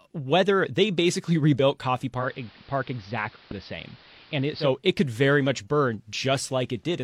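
At 2.16 s the speech slides over from digital to the AM analogue feed, a digital radio blending to analogue, then crossfades back at about 4.71 s. Each crossfade takes roughly 0.12 s. The receiver lost the digital stream and fell back to the AM copy of the station, so for that stretch the level sits about 2 dB lower, and a faint hiss rides well beneath the speech.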